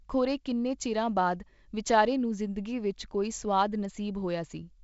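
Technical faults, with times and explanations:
There are no technical faults to list, so no times or explanations apply.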